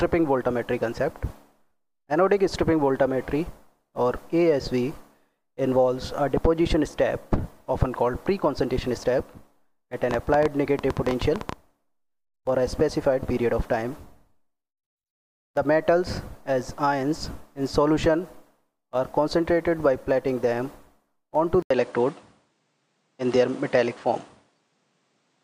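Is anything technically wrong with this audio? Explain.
Yes, there are two faults.

From 10.11 to 11.54 s there is a train of clicks. About fifteen similar pops arrive at roughly 10.6 per second, unevenly spaced. They stand out about 15 dB above the sound. Electrical interference or a struggling interface is the likely cause.

At 21.62 s the input switched to a poorer device, and this continues to the end. The cause is likely a change of microphone or a headset's call profile. An 80 ms silence marks the switch. Afterwards nothing reaches above 9.8 kHz, so the sound turns duller. The level shifts by about 5 dB, and a faint new noise floor appears.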